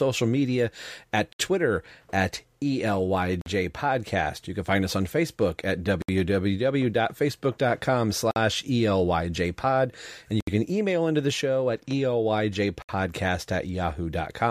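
A speech recording broken by six short gaps at joins of encoded pieces. Silence cuts in at 1.33 s (70 ms), 3.41 s (48 ms), 6.02 s (65 ms), 8.31 s (49 ms), 10.41 s (69 ms) and 12.82 s (68 ms). The codec smears the edges of each dropout, so the silent part is shorter than the gap. The speech then resumes exactly where it stopped. The pieces were encoded separately and joined untrimmed. Each encoder's start-up delay and last-frame padding remain as silence.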